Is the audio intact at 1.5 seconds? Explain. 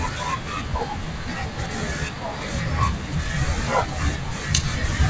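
No. At 1.5 seconds, as throughout the clip, the speech suffers from a wrong sample rate. Audio recorded at 24 kHz is being played back at 16 kHz with no conversion, so every sample arrives later than it should. Speed and pitch fall together by the same ratio: the speech runs at about two-thirds of its proper pace and sits roughly 7 semitones lower, sounding deep, slow and drawn out.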